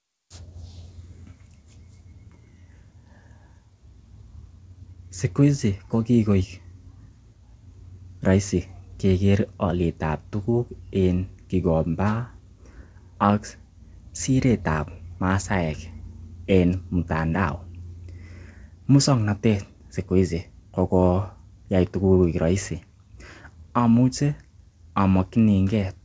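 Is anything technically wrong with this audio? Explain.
No, nothing in this speech stood out as a technical problem on listening.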